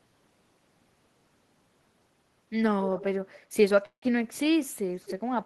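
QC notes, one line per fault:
3.85 to 4.05 s, call audio freeze: the speech stops moving and the last sound is held as a fading buzz, then drops to about 90 ms of silence. The stall fills roughly 169 ms in all. When the speech resumes, it carries on from where it stopped, so nothing is lost, but everything after is about 169 ms later. This likely comes from delayed packets draining the receiver's jitter buffer, with the receiver stretching the last audio until they arrived.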